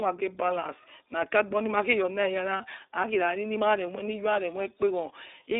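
Throughout the clip, the speech passes through the iLBC codec. The band runs only from about 300 Hz to 3.7 kHz. Each frame is coded on its own, and the sound fits 20 ms frames at 15.2 kbps. The damage is plainly audible: speech sounds rough and slightly synthetic.

Lost iLBC frames come next, from 2.58 to 2.61 s and from 4.34 to 4.37 s. Each gap fits one missing 20 ms frame. The decoder fills it by repeating the last pitch cycle mixed with noise. Each gap sounds like a brief, buzzy held vowel. Speech recovers almost at once.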